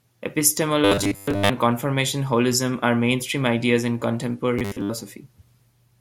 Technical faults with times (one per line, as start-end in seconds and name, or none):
0.85-1.50 robotic sound from repeated short buffers
4.59-4.91 robotic sound from repeated short buffers